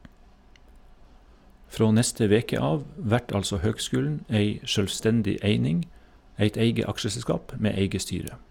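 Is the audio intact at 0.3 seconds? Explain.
Yes, the audio is intact at 0.3 seconds, with no audible fault at that moment.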